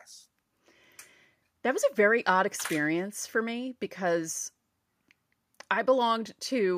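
There are no technical faults to describe in this recording.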